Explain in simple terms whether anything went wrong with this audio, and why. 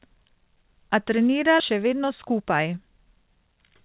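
Two things went wrong, both in how the call handled incoming audio.

At about 1.6 s there is a skip ahead. A chunk of audio, roughly 0.7 seconds, was thrown away, either lost in transit or dropped when the receiver's holding area (the jitter buffer) overflowed with later audio already waiting. Nothing was put in its place, so the sound jumps straight from before the gap to after it, with a missing stretch and an abrupt join.

From about 1.72 s to 3.58 s there is a jitter buffer speed-up. The receiver was holding more audio than it wanted, which added delay. To catch up, it repeatedly snipped out tiny slices, each only a pitch cycle or a few long, removing around 0.15 s in total. The speech plays about 8% faster but keeps its normal pitch, so it comes across as slightly rushed rather than higher.

Throughout, the sound has the narrow, telephone-like quality of a standard phone codec, with nothing above 4 kHz.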